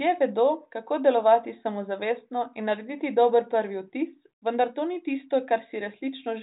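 Nothing's wrong here: it's a speech recording carried over G.726 at 40 kbit/s, and beyond the telephone-style band that stops at 3.8 kHz, there's no technical problem to point to.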